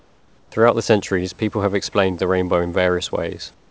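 Speech clip with comfort noise in place of the background from 0.00 to 0.52 s and 3.54 to 3.70 s: the room noise becomes a smooth, featureless noise about 6 dB quieter, likely from discontinuous transmission. Unlike a noise gate, the pauses are filled rather than going silent.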